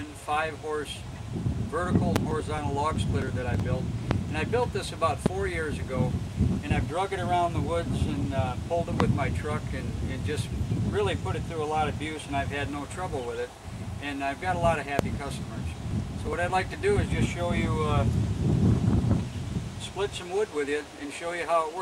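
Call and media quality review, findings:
Loud pop x5: 2.16, 4.11, 5.26, 9.00, 14.99 s, each about 25 ms, roughly 20 to 25 dB over the audio, which continues beneath. Likely a voltage transient (plug, switch, static). Waveform: isolated tall spikes. Spectrogram: thin full-band vertical lines.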